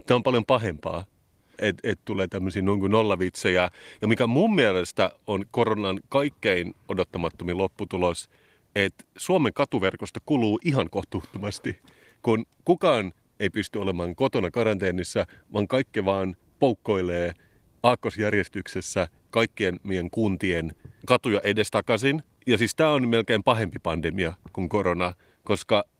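The speech in this clip has no technical faults to report. The Opus voice compression, working at 24 kbps in hybrid mode with the full band kept, leaves only light coding traces.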